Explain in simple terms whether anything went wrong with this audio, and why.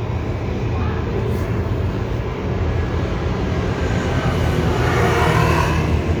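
Nothing went wrong with this audio, as no fault can be heard anywhere in it.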